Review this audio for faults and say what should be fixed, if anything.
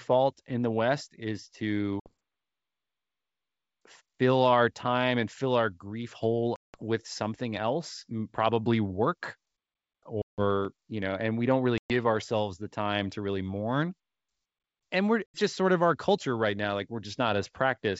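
Packet loss on an ADPCM call occurs five times: 2.00 to 2.13 s (60 ms lost), 6.56 to 6.83 s (180 ms), 10.22 to 10.41 s (160 ms), 11.78 to 11.92 s (120 ms) and 15.27 to 15.38 s (80 ms). Each hole has hard edges. Each loss spans a handful of packets, up to about ten in the longest. The decoder's predictor and step size drift from the sender's. The speech returns slightly distorted, then settles. Packet loss concealment and a jitter buffer that resets the ADPCM state would prevent this.

A block of digital silence sits at 10.65 s, lasting about 3 ms, which fits a 128-sample block. The sound cuts out and back with no fade. It is heard as a tick or dip. It falls just after the third packet loss. The most common cause is that the buffer was not filled in time. Larger output buffers or a higher-priority audio thread would prevent it.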